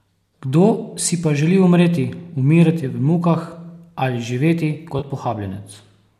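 At 4.99 to 5.04 s the speech turns into a brief smeared, phasey patch. This is AAC frame loss with concealment. About 30 ms went missing, which fits three lost frames of the low-delay stream, likely AAC-ELD, and the decoder filled the gap by reusing the last good spectrum.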